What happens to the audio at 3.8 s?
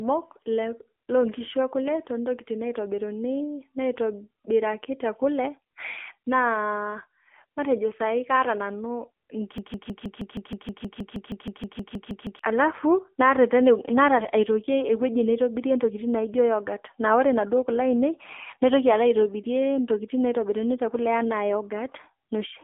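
At 3.8 s the speech is still going through the AMR narrowband mobile codec, which runs the whole clip. It rebuilds the voice from a coarse vocal-tract model at a low bitrate, fitting about 7.4 kbps. Content above 3.4 kHz and below 250 Hz is gone, and the voice sounds plainly buzzy and synthetic.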